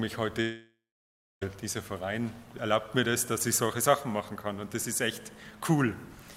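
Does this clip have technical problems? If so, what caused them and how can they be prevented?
Yes. A long network dropout runs from 0.41 to 1.43 s: the sound smears into a fading buzz, then about 0.64 s of silence, and resumes with roughly a second of audio missing, likely from lost packets. Larger jitter buffers and redundant transmission help prevent this.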